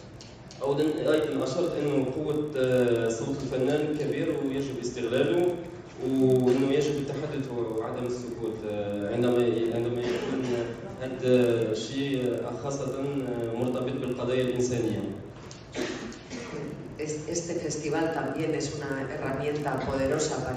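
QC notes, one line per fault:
Throughout: resampler restarted on every block. Each 20 ms block is converted without its neighbours, leaving an edge error every block that is heard as a 50 Hz buzz whenever sound is present.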